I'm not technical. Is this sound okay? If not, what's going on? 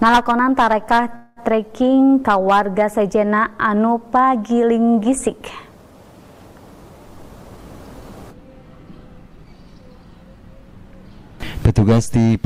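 No. A call audio freeze comes at 1.15 to 1.40 s. For about 0.2 s the sound doesn't move forward. The receiver stretches the last bit of sound into a short buzz or hiss that fades. The likely cause is audio packets held up on the network, so the receiver briefly ran out of sound to play. When the packets arrived, playback picked up exactly where it had stopped. Nothing is lost, but everything after this point is pushed a little later.

A jitter buffer speed-up runs from 7.22 to 9.83 s. During this stretch the sound plays about 8% faster than normal, and it can feel slightly hurried, though the pitch stays the same. This is how the receiver catches up when it has built up too much delay. It trims many tiny slices from the sound, one after another, until roughly a fifth of a second has been removed in total.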